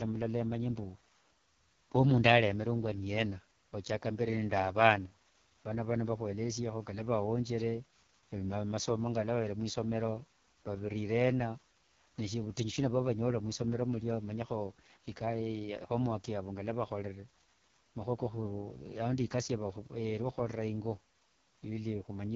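The speech sounds rough and raspy throughout, with nothing above about 6.7 kHz. This is heavy AMR wideband (HD Voice) codec damage, which fits the lowest 6.6 kbit/s mode, where the vocal tract model runs short of bits.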